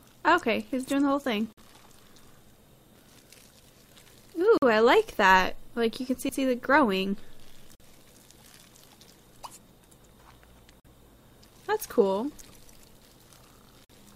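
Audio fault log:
1.53–1.58, 4.58–4.62, 7.75–7.80, 10.80–10.85 and 13.85–13.90 s: gap between chunks. The audio arrives in 3-second pieces, and each join leaves a dead hole of about 48 ms before the next piece starts, probably from padding or a late-starting player. Nothing is actually missing; the sound just stops and picks up again. The hard edges and steady spacing give it that regular stutter.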